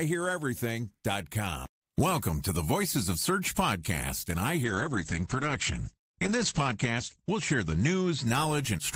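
From 4.65 s to 8.37 s the speech suffers a call bitrate drop: the encoder falls from 32 to 9 kbps, holding the lowest rate for about 2.15 s. Audio bandwidth shrinks from 20 kHz to 8 kHz, so the voice turns muffled and rough, with watery coding artefacts.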